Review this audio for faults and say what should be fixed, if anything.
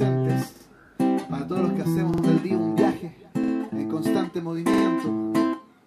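Repeated buffer faults occur at 0.56–0.65 s, 2.14–2.23 s, 3.44–3.53 s and 4.74–4.83 s. In each, a piece about 46 ms long is played twice more in a row, giving a brief stutter with hard joins at every repeat. That piece length fits a 2048-sample buffer that the device replayed because fresh audio was late. The sound carries on afterward without skipping ahead. To prevent this, feed the output device reliably, with larger or more buffers or a higher-priority audio thread.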